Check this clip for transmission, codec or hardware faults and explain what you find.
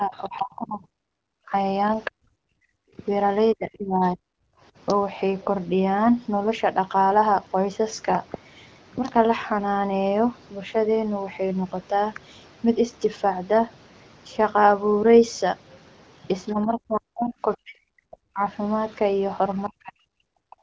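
Three echo-canceller faults turn up in the speech, spread across the start and the last few seconds. The HD Voice path, with nothing above 8 kHz and light coding that fits AMR-WB at around 15.85 kbit/s, can be heard alongside them.

Speech suppressed in double talk occurs at 0.00–1.53 s, 2.08–2.36 s, 2.97–4.32 s, 16.52–18.42 s and 19.69–20.60 s. The likely cause is the far side talking at the same moment, so the echo canceller could not tell the near talker from loudspeaker echo and pulled everything down. The voice sinks by as much as about 40 dB, dulling and breaking up for roughly a second at a time, shorter in the 2.08 s and 2.97 s stretches.

The other side's voice leaking through appears at 0.24–0.41 s and 18.90–18.95 s. The canceller likely left residue of the loudspeaker signal in the microphone feed, so a second, faint voice slips past. It is a brief scrap, about 30 dB below the talker in the first instance and about 40 dB below in the second.

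Background gated by the echo canceller occurs at 2.64–2.69 s. While the loudspeaker was active, the canceller clamped the microphone hard for about 50 ms, so the room tone drops by about 31 dB. This is heard as a sudden hole in the background ambience that closes again almost immediately once the canceller releases its grip.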